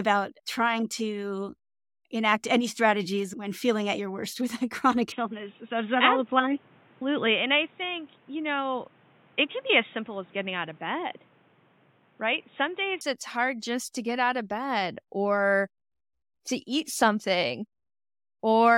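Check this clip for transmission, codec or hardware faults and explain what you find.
One fault: from 5.12 s to 13.01 s the speech turns narrow and boxy, then returns to full bandwidth. The likely cause is an input switched to a poorer device, such as a second microphone or a headset call profile. During that span nothing is present above 3.8 kHz, and a new noise floor sits roughly 30 dB below the speech. The level stays about the same, and the change happens at both boundaries with no silence.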